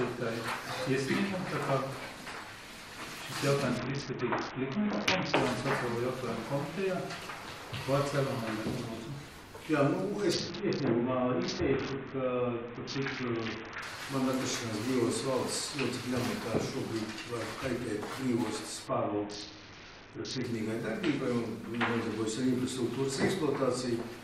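From 3.77 to 5.35 s, 10.33 to 13.82 s and 18.87 to 20.44 s, a Bluetooth SBC bit pool drop dulls the treble and adds gritty quantisation noise, consistent with a fall from 28 to about 6, near 60 kbps. The full restoration after each episode separates this from fixed filtering.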